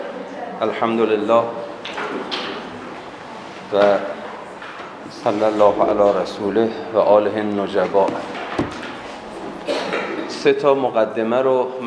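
Listening through, nothing in the audio stood out as a technical fault.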